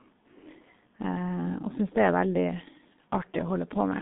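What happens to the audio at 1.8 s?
At 1.8 s the speech carries G.723.1 codec damage, present throughout: 30 ms low-rate frames smear consonants into a muffled, hoarse sound, and the spectrogram shows nothing above 3.8 kHz.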